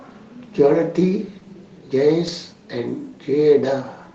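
At about 1.39 to 1.47 s the speech briefly smears and wobbles, as if the preceding sound were held and stretched for a moment before easing back. This is short concealed packet loss: two consecutive 20 ms stretches, 1.39 to 1.43 s and 1.43 to 1.47 s, never arrived in time, so the decoder extended the last sound to cover 40 ms in total and then blended back into the real signal.

From 2.27 to 2.29 s a single 20 ms moment turns grainier and noisier, with no gap or dropout. This is a lost packet rebuilt from error correction. The next packet carried a low-bitrate backup copy, and Opus played that coarser copy in place of the missing frame. The call's audio band stops at 8 kHz, so there is no extra top-end loss during the repair, only the rougher texture.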